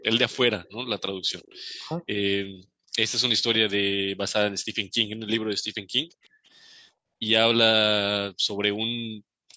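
From 0 to 1.79 s there is an echo leak. A faint copy of the speech trails 370 ms behind, around 30 dB down. The likely cause is a far-end echo canceller that let some loudspeaker pickup through. At 1.13 to 1.24 s the background is gated by the echo canceller. The room sound dips by about 8 dB for roughly a tenth of a second, then returns. From 1.94 to 2.04 s the speech is suppressed in double talk. The voice drops by about 10 dB for a brief moment, likely because both sides spoke at once and the canceller ducked everything. Deeper background gating follows at 2.49 to 2.96 s, 3.91 to 4.76 s, 5.58 to 7.23 s and 8.19 s to the end. Each time the room tone falls away by about 40 dB. It then snaps back. Inside the third gap, at 6.23 to 6.5 s, the echo leak returns, fainter still, about 35 dB down, again 370 ms late.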